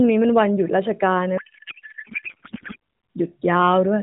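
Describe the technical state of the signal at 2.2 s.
At 2.2 s the speech is lost inside a codec payload misread that runs from about 1.38 s to 2.76 s. The AMR frames are packed octet-aligned but are being unpacked as bandwidth-efficient, so every field lands on the wrong bits and the decoder builds parameters that make no sense. What comes out is garbled noise and warble that hardly tracks the speech, bounded at 4 kHz by the light AMR-NB coding, which sounds like roughly 12.2 kbps.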